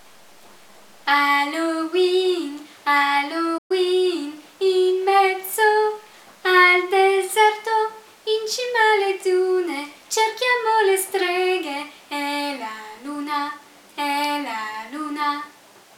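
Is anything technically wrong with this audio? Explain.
Yes. At 3.57 s the sound cuts out in mid-flow and stays silent for about 120 ms, picking up again around 3.71 s. This is a playback stall. The gap is an abrupt hole in the output rather than a fade or a glitchy burst. The likely cause is that the player ran short of data or had its playback thread held up, so the output went silent until it recovered.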